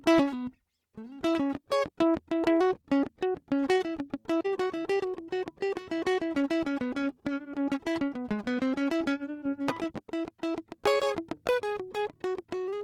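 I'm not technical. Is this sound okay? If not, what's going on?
No, there are a few small glitches in the music. At 3.33 to 3.36 s and again at 4.42 to 4.46 s, short concealed packet loss: bits never arrived, so the player patched each gap with a brief smear. At 3.60 to 3.64 s, a short stall from a late packet: the player held the sound about 22 ms while waiting, then carried on.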